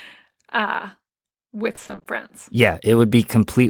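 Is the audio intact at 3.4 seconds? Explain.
Yes, the speech at 3.4 seconds plays through cleanly with no dropout, glitch or other fault at that moment.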